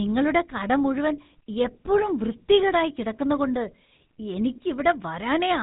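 Throughout, the speech carries GSM full-rate codec damage: pulse-driven vocal-tract modelling leaves a buzzy, gravelly roughness and nothing above 3.8 kHz, unlike clean band-limiting, and fits a 13 kbps coder.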